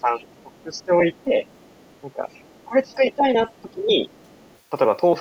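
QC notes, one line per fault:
0.00–2.95 s, 3.57–3.62 s and 4.10–4.58 s, other side's voice leaking through: a faint second voice sits way under the talker, roughly 35 dB down. It's likely loudspeaker echo that the echo canceller didn't fully strip from the mic.
0.01–1.33 s, 2.03–2.22 s, 2.66–3.24 s and 3.62–4.05 s, speech suppressed in double talk: the talker's level dips in patches, by around 15 dB at worst in the first and last runs, around 5 dB and 10 dB in the others. This is likely the canceller ducking everything while both sides talked at once.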